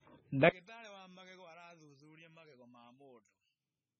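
Throughout, heavy MP3 compression, likely at around 16 kbps, leaves the speech watery and swirly, and the spectrogram shows a hard ceiling at 9.2 kHz with flickering holes. From 0.49 s to the end, one channel inverted likely cancels the mono sum by about 34 dB, so the speech collapses to a faint residue and the waveform shrinks almost flat.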